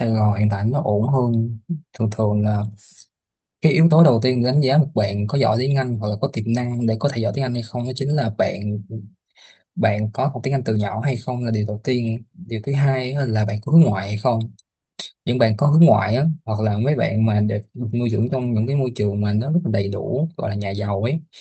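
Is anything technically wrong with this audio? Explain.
Yes. The speech carries two related timing faults.

Clock drift between sender and receiver runs through the whole clip. The sender's clock runs fast, by roughly 4 percent. Audio arrives faster than it is played. The jitter buffer keeps filling. Playback cannot stay steady, and small hiccups recur throughout.

Repeated timing corrections run from 0.13 s to 21.18 s, pacing the audio at 104 percent. To drain the overfull buffer, the receiver keeps cutting out short pieces. The cuts come unevenly spaced. They sound like slight skips and an unsteady, hurried tempo.

The audio came through a call path using the Opus codec, and its top end stops near 8 kHz.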